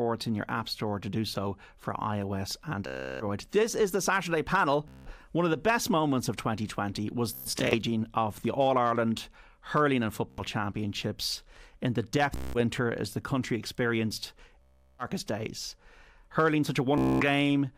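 Speech with repeated Bluetooth stutter. The sound sticks and buzzes at 2.87–3.24 s, 4.88–5.11 s, 7.33–7.76 s, 10.30–10.41 s, 12.36–12.58 s, 14.62–15.05 s and 16.98–17.25 s. Packets arrived late or not at all. The receiver looped its last short slice, about 15 to 25 ms, until data returned. Each gap lasts 0.08 to 0.37 s. At 7.3 s the dropouts scatter, with the longest run about 0.12 s. Playback then resumes further on.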